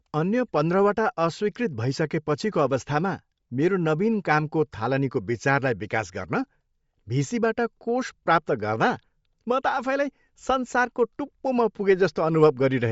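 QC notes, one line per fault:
Throughout: Bluetooth LC3 compression. The speech has nothing above 7.7 kHz, and the top of the remaining band carries a plainly audible breathy, grainy texture. This is likely a low-rate Bluetooth LE Audio link. Its transform codec runs in short frames, here 10 ms frames. At a rate near 32 kbps it discards much of the upper spectrum and fills the gaps with synthetic noise, which gives the voice that breathy, grainy edge.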